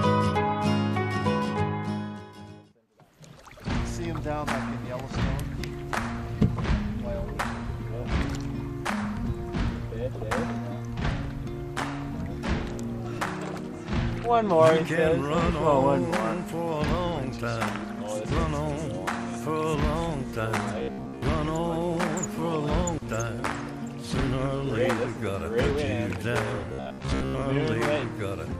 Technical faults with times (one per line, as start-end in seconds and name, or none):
20.79-21.22 robotic sound from repeated short buffers
26.73-27.42 robotic sound from repeated short buffers